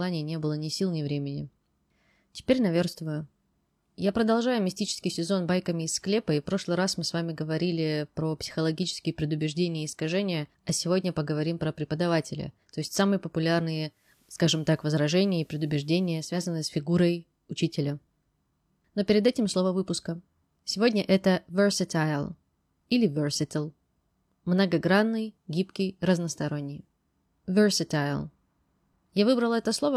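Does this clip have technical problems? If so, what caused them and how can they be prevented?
Yes. From 13.86 s to 16.41 s, just before "с фигурой учителя", the speech shows digital radio blending to analogue: the receiver lost its digital stream and cross-faded over about 0.25 s to the station's FM broadcast, then back. During that stretch a faint hiss, around 40 dB below the signal, appears, and the level shifts by about 1 dB. Preventing it means recording from a stronger digital signal, with a better-placed antenna, or disabling analogue blend on the receiver.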